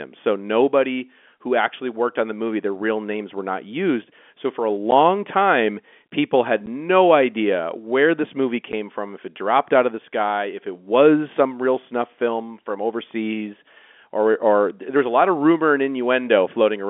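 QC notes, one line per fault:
4.91 s, 6.66 s and 8.72 s: packet loss filled with silence. Each is a 10 ms hole where one lost packet was replaced by digital silence, so the speech drops out abruptly with hard edges. On the waveform each appears as a flat silent gap with vertical cliffs. On the spectrogram it is a thin blank column inside the narrow telephone band of the G.711 line.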